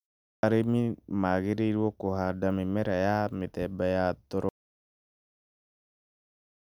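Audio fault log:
0.38 s, clipped start after a pause: speech bursts in abruptly from silence, its first 51 ms missing, because the output device was still waking after the 0.38 s pause.
4.49 s to end, audio dropout to silence: after "mĩmera ya mĩthemba ya" the sound cuts to silence with no room tone, likely a lost input while recording continued writing silence.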